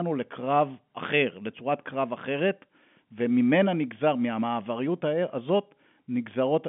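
No technical faults are audible.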